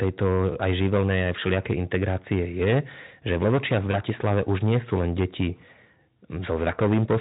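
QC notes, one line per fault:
Throughout: hard clipping. The signal is driven roughly 15 dB past what the chain can pass, so on every loud syllable the waveform hits the ceiling and is sliced flat. About a tenth of the samples end up on those flat tops, which is a heavy overload. The squared-off peaks throw harmonics high into the spectrum, so the speech carries a harsh fuzz on every loud sound rather than occasional crackle, and loud passages sound gritty and compressed.
3.91 to 3.97 s: VoIP packet loss concealed by the speech codec. A single frame's worth of audio, about 20 ms, never arrived, which fits one lost packet, and the Speex decoder filled the gap by extending its last pitch and spectral shape while easing the level down. That produces a brief stretched, fading sound. Because each decoded frame builds on the previous one, the sound stays weak and off-colour for a few tens of milliseconds after 3.97 s before fully recovering.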